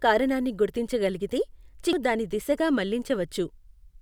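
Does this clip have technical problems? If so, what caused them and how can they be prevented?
Yes. Damaged data in a compressed stream causes a brief blip at 1.93 s, right after "కారణాన్ని గుర్తించగలిగితే". The decoder lost sync. Checksums and error-resilient transport would prevent it.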